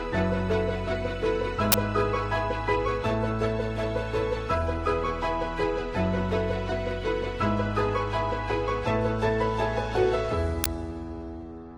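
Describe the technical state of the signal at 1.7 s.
A brief, loud burst of harsh digital noise occupies 1.72 to 1.74 s. This is an uninitialised buffer: a 20 ms block played before audio was written, so leftover memory came out as samples.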